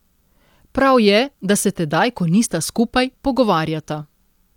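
Nothing stood out on listening to this recording.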